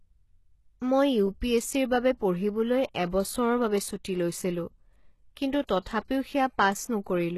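From the start to the end, the whole clip carries plainly audible codec damage. Nothing is present above 12.3 kHz. The top band does not sound like the original treble. Its harmonics fail to line up with those below. This is likely HE-AAC compression, with the band rebuilt by spectral band replication from copied lower bands under a coarse envelope. The heavy damage points to a very low bitrate, around 16 kbps.

At 5.67 s there is pre-echo. A short hiss arrives just before an attack, spread over about 19 ms. The codec spreads its quantisation noise across a whole transform block. The attack falls late in its block. So noise sized for the loud part also fills the quiet moment before it. The attack sounds softened and smeared.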